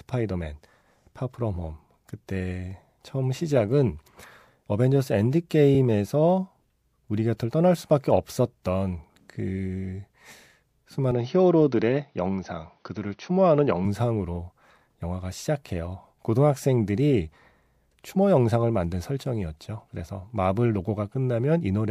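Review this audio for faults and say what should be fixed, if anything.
From 11.11 to 13.85 s the speech turns duller, likely an input switched to a poorer device: a spectrogram shows nothing above 6.2 kHz, plus a faint new noise floor. Locking the recording input to one microphone would prevent it.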